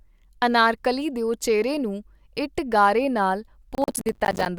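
From 3.75 to 4.46 s the speech breaks up into processor overload crackle. The processor couldn't keep up, missing buffer deadline after deadline. Each miss drops a tiny slice of silence into the audio with hard edges either side, and the dropouts are spaced in a way that fits buffers of around 10 ms. Stack a few dozen of those together and you hear a gritty, tearing crackle over the speech until it clears at 4.46 s.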